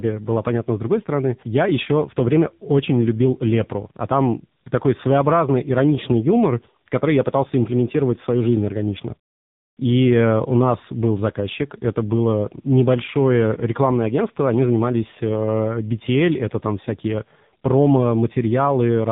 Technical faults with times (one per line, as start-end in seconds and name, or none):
0.00-19.12 tandem speech coding